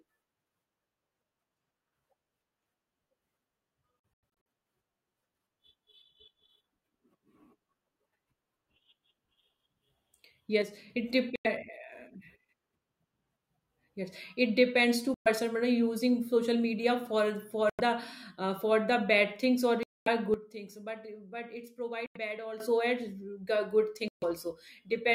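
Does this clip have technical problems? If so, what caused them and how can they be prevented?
Yes. Bluetooth dropouts cut the speech at 4.0–4.46 s (several short holes totalling about 0.23 s, the longest about 93 ms), 11.36–11.47, 15.14–15.28 (just after "it depends"), 17.70–17.80, 19.83–20.08, 22.06–22.17 and 24.08–24.24 s. The likely cause is radio packets arriving too late and being discarded, so playback goes silent and then resumes further along. Hole lengths fit packets of roughly 23 ms. On a waveform these are flat, sharp-edged gaps, and on a spectrogram they are empty vertical bands. Keeping the headphones close to the source, away from Wi‑Fi congestion, or using a wired connection prevents this.

Sudden gain jumps drop the level by about 6 dB at 10.62–10.9 s and by about 12 dB at 20.34–22.6 s. Speech and background noise fall together, likely from a gain change applied without a ramp. 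The waveform envelope steps down abruptly, and the spectrogram darkens uniformly across all frequencies. Smoothing gain changes over a few milliseconds prevents the jumps.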